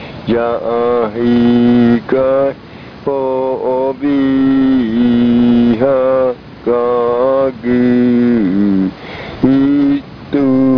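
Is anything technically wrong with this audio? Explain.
No, nothing technically wrong stood out on listening to this audio.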